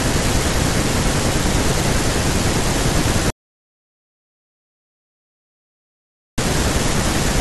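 It's a speech clip with an audio dropout to silence from 3.30 to 6.38 s: about 3.1 s of dead silence, no room tone, likely a lost input or stray mute.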